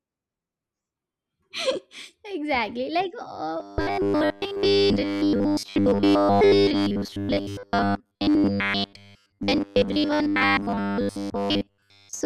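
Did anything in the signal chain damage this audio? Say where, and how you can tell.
Yes. The buffer likely starved and replayed 10 ms chunks, causing robotic sound from repeated short buffers: a rigid 100 Hz buzz from 3.60 s to 12.25 s.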